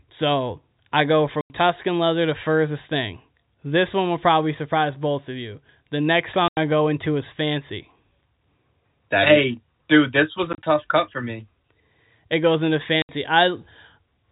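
Right after "I go" at 1.41 s the speech drops into dead silence for 90 ms, and again at 6.48 s. After "is dude this was" around 10.53 s, short gaps scatter over 100 ms before "cut for me". After "goes into" at 13.02 s there's a 70 ms hole. That's packet loss filled with silence: hard-edged gaps in whole multiples of 10 ms, which fits 10 ms packets. Underneath is the narrowband telephone sound of the G.711 coding.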